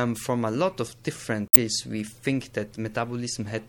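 Throughout, the encoder has likely been starved of bits, consistent with MP3 compression at around 64 kbps, so faint detail swirls with a watery, metallic edge. From 1.45 to 1.57 s, damaged data in the compressed stream throws the decoder out of sync briefly before normal decoding resumes.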